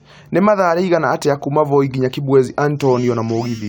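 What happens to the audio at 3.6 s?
Nothing goes wrong at 3.6 s: the speech continues intact through that moment with no audible fault.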